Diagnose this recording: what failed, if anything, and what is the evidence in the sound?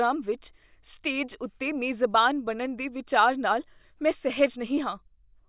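Nothing failed here: the speech comes through without a single dropout, click, glitch or other disturbance anywhere in the recording, so there's nothing to diagnose.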